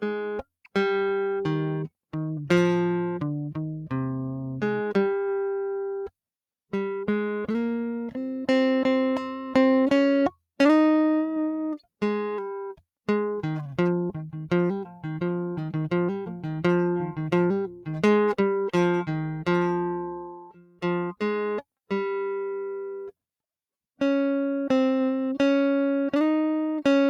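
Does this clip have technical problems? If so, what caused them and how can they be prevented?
Yes. Sound cut by the noise suppressor, from 20.22 to 20.84 s: the suppressor mistook part of the music for background noise and pulled its level down, by about 19 dB at the deepest point, for roughly seven-tenths of a second. Sustained and decaying material is what sinks or gets its tail clipped here, while sharp attacks pass through. To prevent it, disable noise suppression for music or switch to a gentler, music-aware setting.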